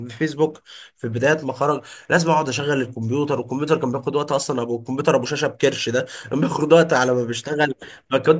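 From 3.25 to 4.75 s the speech picks up a steady ticking at 4 Hz, the mark of a resampler restarted on every block. The 24 kHz to 16 kHz conversion was run on each 250 ms block in isolation, so every block edge lacks proper neighbouring samples and leaves a small tick whenever signal is present.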